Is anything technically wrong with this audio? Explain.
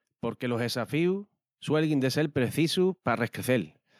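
Yes. From 0.4 to 3.75 s there is automatic gain rising: the gain control judged the input too quiet and raised it by about 6 dB, so speech and background swell together. The waveform envelope widens steadily, and the spectrogram brightens evenly across all bands.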